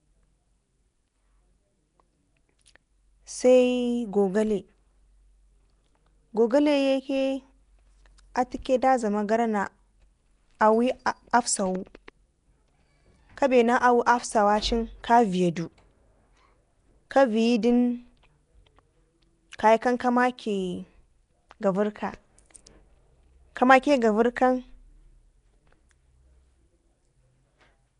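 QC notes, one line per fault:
throughout, Nellymoser compression: the speech has a rough, hissy halo and a smeared, underwater blur, likely from the Nellymoser Asao codec at a rate fitting about 44 kbps. Its coarse bit budget leaves weak bands empty and fills them with noise. A spectrogram shows grainy patches between harmonics and nothing above 10.6 kHz.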